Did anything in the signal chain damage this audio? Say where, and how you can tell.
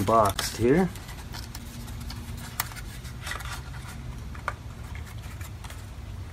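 Yes, at the driver or buffer stage: two blocks of digital silence, 16 ms at 0.34 s and 5.3 ms at 1.59 s, the latter fitting a 256-sample buffer. Unfilled output became silence with hard edges, unlike concealed network loss, which smears.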